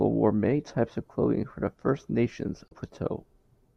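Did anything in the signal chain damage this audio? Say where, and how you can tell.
Yes: damaged data in a compressed stream, at the codec stage, from 2.68 to 2.72 s. About 40 ms of the speech gives way to a short decoding glitch. Some of the compressed bytes there were corrupted, so the decoder misread those frames, lost sync and skipped forward to the next valid frame header. The garbled output comes from that re-synchronisation, not from the recording itself.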